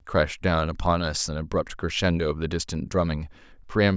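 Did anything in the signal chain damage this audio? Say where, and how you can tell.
No, nothing in the signal chain has left an audible mark on this speech recording. There is no stage to point to, because no moment in the signal stands out as damage.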